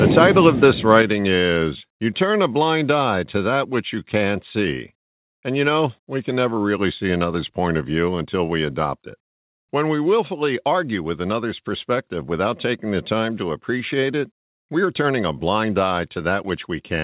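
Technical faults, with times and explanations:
0.17–0.65 s and 0.95–1.0 s, microphone overload: The loudest peaks are flattened and take on a harsh, crackly edge. The first stretch overshoots by about 3 dB, the second by about 1 dB, with roughly one percent of samples cut. The likely cause is input gain set too high.
1.02 s, microphone volume stepped down: Right after the second distorted peak, the whole signal, speech and background together, drops by about 5 dB in one step. This sounds like software likely reacting to the clipping by lowering the device's input level at once.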